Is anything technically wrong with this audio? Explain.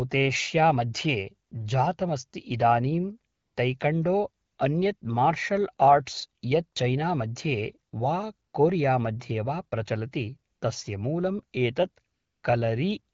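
Yes. At 1.49–1.51, 3.33–3.55, 4.45–4.57, 4.97–5.01, 8.49–8.53, 10.53–10.61 and 12.13–12.43 s the real background gives way to a smooth, even hiss that switches in and out. This is AMR comfort noise: the phone judged the speech silent, stopped sending frames, and the receiver synthesised noise from a rough level-and-spectrum description.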